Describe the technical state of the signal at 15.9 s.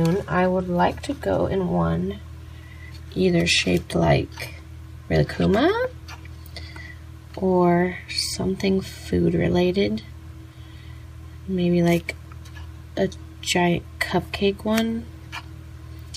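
At 15.9 s the signal is intact, with no audible fault at that moment.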